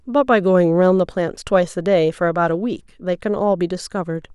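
Speech recording with no audible technical faults at any point.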